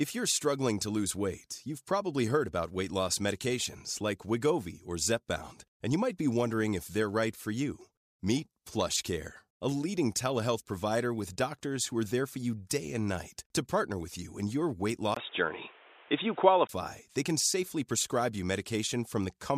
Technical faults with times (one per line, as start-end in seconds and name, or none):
15.14-16.69 input switched to a poorer device